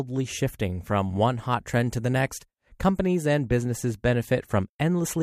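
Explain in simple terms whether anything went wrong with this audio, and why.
At 0.91 s, just before "one hot trend to", a brief watery blip sounds in the speech. This is DAB burbling: weak digital radio reception let a few corrupted bits slip past error correction, putting short blips of noise into parts of the sound.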